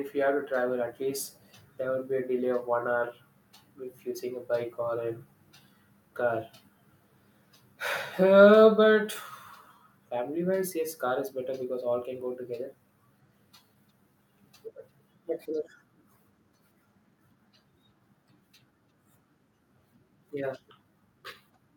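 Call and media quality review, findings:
Echo leak, 1.25 to 1.58 s: faint delayed copy of the speech trailing 347 ms behind, around 40 dB below it. Echo leak, 15.65 to 15.7 s: short scrap at the same 347 ms lag, louder at around 30 dB down. Likely far-end loudspeaker playback reaching its microphone, with the echo canceller leaving a residual that was sent back. The identical delay points to one fixed return path.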